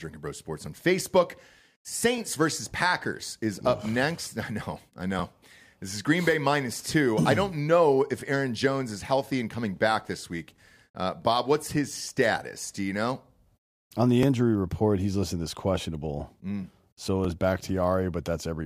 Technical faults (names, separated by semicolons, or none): overlapping chunks